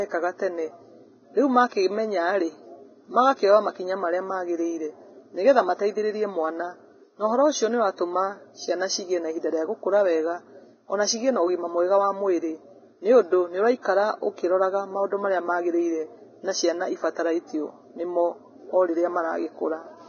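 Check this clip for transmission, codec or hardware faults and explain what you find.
One fault runs through the whole speech clip: heavy damage most likely from Vorbis compression. Nothing reaches above 6.5 kHz, and the remaining treble sounds hissy and grainy, with roughened tones and smeared consonant onsets. That points to a low bitrate, probably around 17 kbps, where the codec cuts the top band and codes upper detail so coarsely that it turns into noise of similar energy. A plain low-pass filter would sound dull but clean, without this grain.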